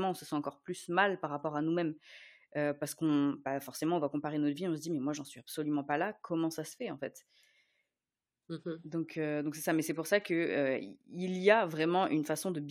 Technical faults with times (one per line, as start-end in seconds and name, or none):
none